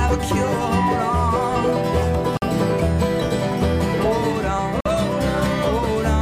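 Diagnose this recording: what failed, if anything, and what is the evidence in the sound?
Two hard-edged holes of silence, each 50 ms long, interrupt the sound at 2.37 s and 4.81 s, about 2.5 s apart. This is a gap between chunks at the playback or streaming stage. The audio arrived in 2.5 s blocks, and silence was inserted at each join.

A brief blip at 4.58 s, shorter than 20 ms, breaks the sound. This is damaged data in a compressed stream at the codec stage. Corrupted bytes caused the decoder to misread a frame and lose sync before finding the next valid frame header.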